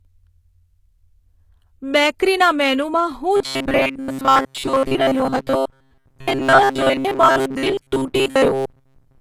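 A speech clip in which the treble sounds gritty and lispy throughout, with sibilants turning metallic, likely from HE-AAC compression rebuilding the top band from lower frequencies at a low bitrate around 20 kbps. From 3.37 s, right after "બેકરીના મેનૂમાં", to the end, the sound becomes a rigid metallic buzz pitched near 134 Hz, likely robotic sound from repeated short buffers of about 7.5 ms replacing most of the real audio.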